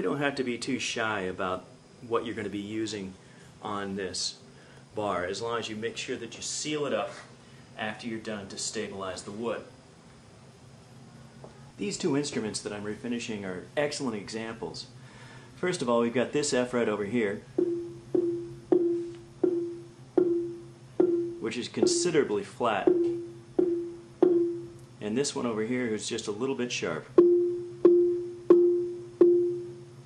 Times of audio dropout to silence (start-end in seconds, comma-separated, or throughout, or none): none